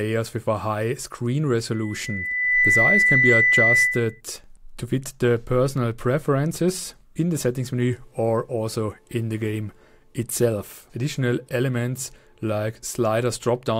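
At 1.72 s a loudspeaker feedback squeal begins: a steady 2 kHz tone swells over roughly a second until it sits a few decibels above the rest of the sound, then stops at 4.21 s. The microphone was re-amplifying its own loudspeaker output, and loop gain at that frequency exceeded unity.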